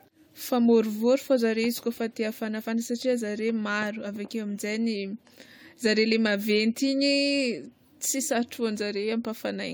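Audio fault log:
Throughout, generation loss: the speech has a swirly, smeared, hollow quality beyond what a single lossy encode would leave, with consonant attacks softened and a watery churn in the upper bands, though content extends up to 20 kHz. This likely comes from about five successive AAC-LC decode and re-encode passes, each quantising on a shifted frame grid so noise and spectral gaps accumulate; the residual texture fits a chain near 96 kbit/s.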